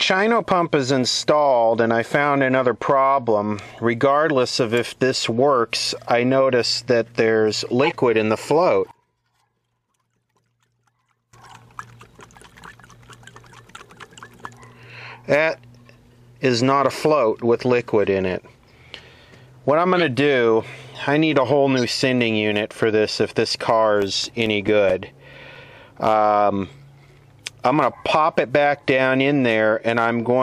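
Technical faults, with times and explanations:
7.84–7.92 s, 19.96–20.03 s and 21.77–21.84 s, corrupt frame decoded: a couple of damaged frames play as brief loud glitches, the last one quieter, each lasting about two frames' length.
8.91–11.33 s, one channel inverted: the sound falls by about 24 dB to a faint residue rather than silence, likely from reversed polarity cancelling the shared content in mono.
24.02–25.99 s, CD scratch ticks: ten tiny regular ticks, about five a second and none longer than roughly 7 ms, where the player patched unreadable data at each disc turn.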